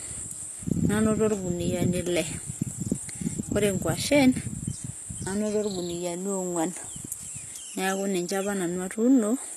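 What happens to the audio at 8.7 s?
At 8.7 s the speech has the same gritty, metallic treble heard throughout, with lispy sibilants and nothing above 12.3 kHz. This is likely HE-AAC compression at a very low bitrate, around 16 kbps, rebuilding the upper band from copied lower harmonics.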